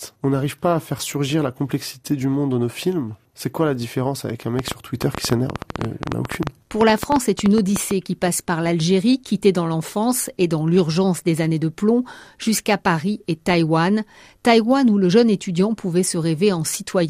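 From 4.59 to 7.92 s, likely interference injects a train of clicks: around thirty irregular, loud pops, ten a second, right after "la différence avec un".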